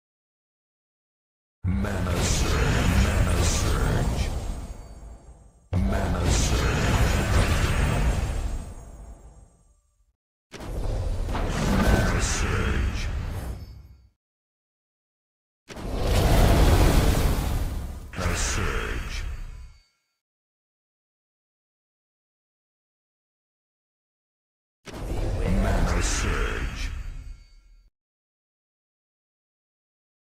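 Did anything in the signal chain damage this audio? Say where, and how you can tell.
No, nothing in the signal chain damaged this audio.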